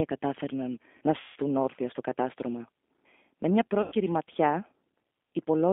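Right from the start the speech runs through a G.729 codec at 8 kbit/s, and the damage is easy to hear. The sound sits in a narrow telephone band of roughly 250 Hz to 3.5 kHz. Because the codec rebuilds each 10 ms frame from a vocal tract filter, a pitch predictor and a handful of pulses, the speech comes out rough and a bit synthetic. It stays intelligible but never quite natural.

At 1.20 s there's a dropout of VoIP packet loss concealed by the speech codec, running to 1.37 s and covering about 160 ms of missing audio. The decoder keeps going on its last pitch and filter settings and turns the gain down frame by frame, so the sound smears into a buzzy tone or a coloured noise that fades. Since each frame builds on the previous one, the speech sounds weak or distorted for a little while after real packets arrive again. The same thing happens again from 3.82 to 3.94 s, this time with about 100 ms lost, producing a shorter smear and the same brief weak recovery.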